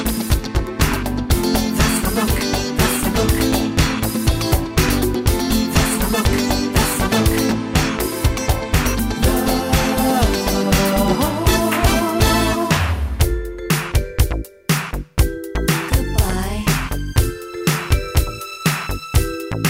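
From 15.54 s to the end, sample clock jitter sets in: converter timing wanders by around 7 microseconds, adding slope-dependent hiss roughly 20 dB below the signal, strongest on loud, bright passages.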